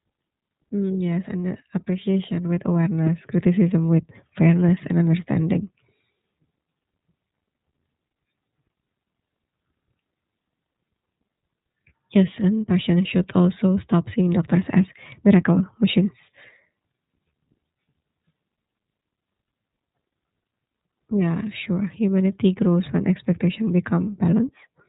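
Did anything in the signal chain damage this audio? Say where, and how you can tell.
Yes. The damage sits at the codec stage: the whole speech recording has passed through the iLBC codec, and its damage is plainly audible. The band stops at 4 kHz, so sibilants lose their edge and the voice sounds slightly rough and synthetic throughout. On a spectrogram, energy ends at a flat ceiling near 4 kHz. Each 30 ms frame is coded independently, so the texture resets frame by frame, which fits the 13.33 kbps mode.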